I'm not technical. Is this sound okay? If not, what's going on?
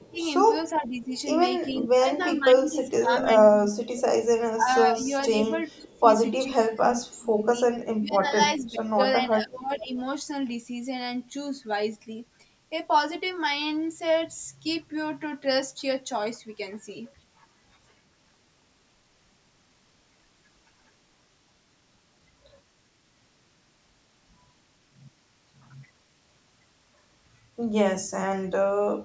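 No. From 0.0 to 0.2 s, 0.74 to 1.12 s, and on and off between 1.72 and 9.9 s, the speech dips and fades, likely speech suppressed in double talk. The call's echo canceller turned everything down while both sides talked.

There's also echo leak: a faint copy of the speech comes back about 0.4 s late from 0.16 to 3.25 s, and very quietly at 5.71 to 6.0 s and 9.95 to 9.99 s. This is likely loudspeaker sound the canceller missed.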